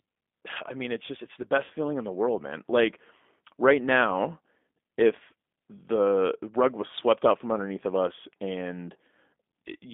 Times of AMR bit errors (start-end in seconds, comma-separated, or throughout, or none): none